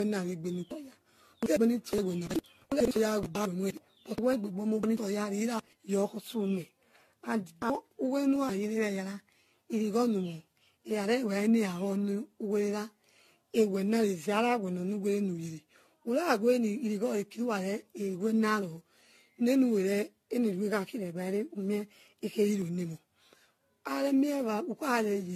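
From the start, the speech has a swirly, hollow quality with smeared consonant attacks, and nothing is present above 14 kHz. This points to generation loss, most likely from repeated lossy encoding, about seven passes through AAC-LC at a rate that fits 64 kbit/s. Each re-encode quantises on a shifted frame grid, so noise and spectral holes pile up. A single low-bitrate encode would sound dull but not this phasey or this hollow.

At 22.62 s there is a single sharp tick from a block of digital silence. The signal drops to silence for about 0.73 ms, roughly the length of 32 samples, then returns with no fade. A dropout this short registers as one tick, not a hole. A longer buffer underrun would leave an audible gap, and a noise-type click would not have this hard cut to silence.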